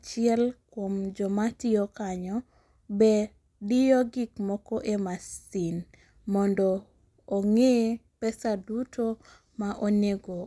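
No technical faults can be heard anywhere in this speech.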